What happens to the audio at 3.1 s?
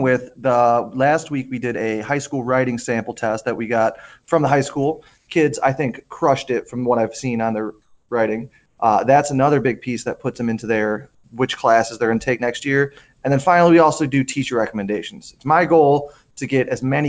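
Nothing goes wrong at 3.1 s; the audio runs on intact through that moment, with only the steady band limit of the call path, which carries nothing above 8 kHz in a way that fits a G.722 link.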